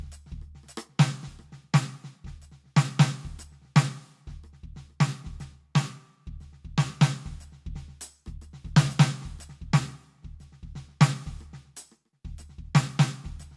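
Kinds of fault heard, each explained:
No kinds of fault are heard in this music.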